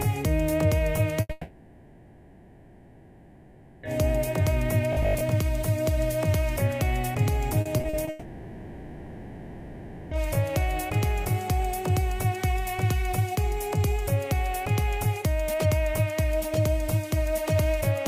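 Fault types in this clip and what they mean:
Burst of packet loss: about 80 ms of consecutive packets never arrived in time, so the receiver stretched the last sound across the hole at 1.21 s. That gives a brief fading buzz or hiss before playback jumps ahead with that stretch missing.
Long network dropout: incoming audio most likely stopped for over two seconds, from 1.31 to 3.85 s and again from 8.09 to 10.13 s. Both times the last sound is carried on throughout rather than falling silent, and audio resumes with those stretches gone.
Robotic sound from repeated short buffers: new audio likely arrived too seldom from 4.93 to 5.23 s, so 20 ms pieces were replayed to fill time. For roughly half that span this forces a rigid 50 Hz buzz onto the sound while real audio is skipped.
Repeated packet loss (robotic sound): between 7.61 and 8.09 s, packets went missing five separate times, up to 40 ms each and 140 ms in total. 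Each gap was patched by continuing the last sound, leaving this stretch choppy with pieces missing.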